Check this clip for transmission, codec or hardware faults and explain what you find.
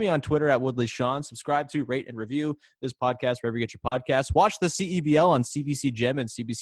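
Two packet-loss faults affect this speech clip, one involving recovery from error correction and one involving concealment.

Lost packet rebuilt from error correction, at 1.09 to 1.19 s, 2.11 to 2.33 s and 3.91 to 3.97 s: packets were lost, and low-bitrate copies carried in the following packets were played instead. There's no gap, but those stretches of 60, 120 and 40 ms sound rougher and noisier.

Short concealed packet loss, at 3.87 to 3.93 s: about 40 ms never arrived in time, so the receiver extended the preceding sound and blended back in, leaving a brief smear just before the rebuilt section.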